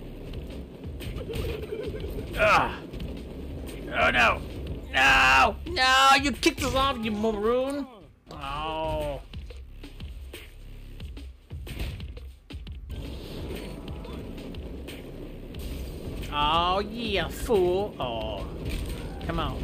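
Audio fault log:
7.70 s, electrical switching spike: one sharp snap, peaking around -25 dBFS, sits on top of the sound. Likely a nearby switch arcing into the line.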